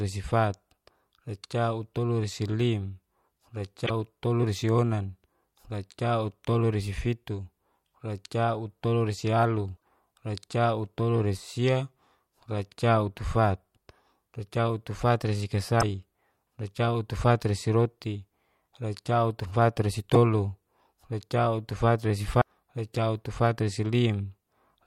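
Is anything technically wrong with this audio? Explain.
Yes. Damaged data in a compressed stream shows up five times: 3.83–3.91 s, 9.73–9.77 s, 15.78–15.83 s, 20.14–20.17 s and 22.38–22.43 s, each lasting between about 24 and 76 ms. Corrupted bytes make the decoder misread frames and lose sync until it finds a valid header. Each one is heard as a brief chirp, squawk, click or short hole cutting into the speech. On a spectrogram and waveform it's a short, abrupt disruption.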